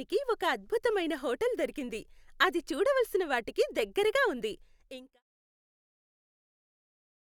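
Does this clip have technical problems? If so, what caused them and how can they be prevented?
No, there's nothing wrong to fix in this speech, and the gentle fade-out that begins around 4.5 s and finishes at 5.23 s is just the ending easing away smoothly, with no click or hard edge.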